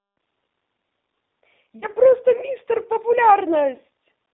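G.729 codec coding runs through the whole speech clip. The sound is confined to roughly 250 Hz to 3.7 kHz and rebuilt from a vocal tract filter, a pitch predictor and sparse pulses, which fits an 8 kbit/s G.729A stream. The result is plainly rough and synthetic.

VoIP packet loss concealed by the speech codec occurs from 1.80 to 1.87 s and again from 3.76 to 3.80 s. Each gap points to about 20 ms of missing audio. The decoder stretched its last pitch and filter with falling gain, producing a brief buzzy tone or coloured noise that fades, and the voice stays weak or distorted after the audio resumes.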